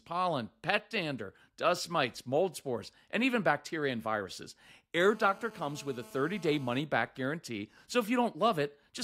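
From 5.02 to 6.80 s, right after "even bacteria and viruses" and ending before "back guarantee so", a GSM phone buzz cuts into the speech. A nearby 2G handset on a call pulses its transmitter about 217 times a second, and the audio circuitry rectifies those radio bursts. The result is a hard, raspy buzz about 23 dB below the speech, holding steady throughout. Its 217 Hz pitch and dense harmonics set it apart from smoother 50 or 60 Hz mains hum.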